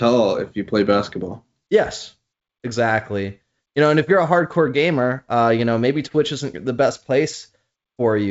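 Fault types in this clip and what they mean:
No faults heard in this clip.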